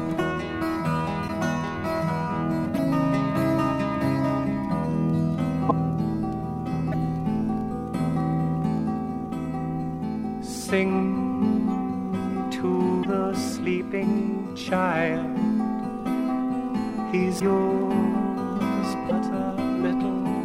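There are quick hiccups at 1.27, 2.76, 5.68, 6.91, 13.02, 17.39 and 19.08 s. Each lasts about 30 ms, and the audio lurches forward a touch. That's a broken MP3 bit reservoir, likely: a frame went missing, so the frame after it reached back for borrowed bits and found the wrong bytes. Each glitch spans roughly one frame, which fits 26.1 ms MP3 frames.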